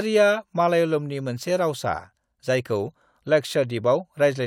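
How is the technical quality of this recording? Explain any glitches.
No glitches or faults can be heard anywhere here.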